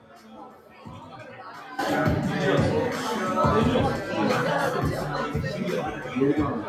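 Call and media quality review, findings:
Noise suppressor applied to music or sounds, whole clip. Level swings of around 10 dB as a speech-tuned suppressor treats steady tones, ambience and tails as noise. Attacks pass, sustains sink. Waveform: breathing envelope, transients intact, decays clipped. Spectrogram: broadband energy blotchy between onsets, sustained partials fading and reappearing.

Sound cut by the noise suppressor, 0.00–0.86 s (deepest drop about 9 dB), 1.02–1.39 s and 5.91–6.16 s (about 5 dB each). Steady content classed as noise and pulled down harder than its surroundings. Waveform: visible amplitude trough. Spectrogram: a darker band across those spans, the opening one longest and deepest.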